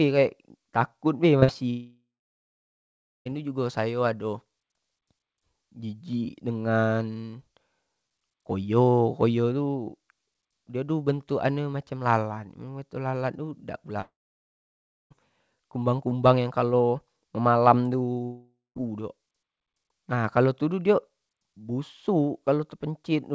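At 1.40 s and again from 1.44 to 1.50 s the speech shows short concealed packet loss: about 20 ms and then about 40 ms of audio failed to reach the decoder in time. The receiver extended the preceding sound to cover each gap before blending back into real audio, so the passage has a brief smeared, wobbly quality. In this speech clip the content in those hundredths of a second is replaced rather than heard.

Three longer gaps follow, each likely a long network dropout. From 1.70 to 3.27 s about 1.56 s of audio is missing. A fading continuation of the last sound gives way to roughly 1.2 s of silence, and speech resumes at "itu jugo" with the intervening material gone. From 14.01 to 15.12 s the same happens over about 1.1 s, with around 1.0 s silent. At 18.24 to 18.77 s about 0.52 s is lost, and the fading fill covers most of it, leaving only about 0.19 s of silence. Throughout, nothing is present above 8 kHz, which fits a G.722 wideband call path.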